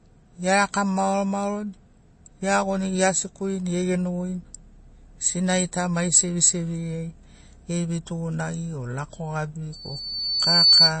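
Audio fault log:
Throughout, MP3 compression: likely a low bitrate around 32 kbps, nothing above 8.3 kHz, and plainly audible watery, swirly smearing as weak detail flickers in and out.
9.72–10.94 s, loudspeaker feedback squeal: a 4.5 kHz tone swells over about a second to roughly 10 dB above the speech, the mic catching its own speaker.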